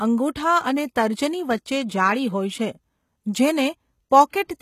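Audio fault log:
Throughout: HE-AAC compression, likely the cause of the plainly audible codec damage across this speech. The lower spectrum is coded directly, while the treble is rebuilt by copying lower bands upward and shaping them with a coarse envelope, so the top sounds synthetic. Harmonics fail to line up across the crossover, and s sounds turn gritty and lispy. Content stops near 14.9 kHz, and the overall damage fits a very low bitrate of around 20 kbps.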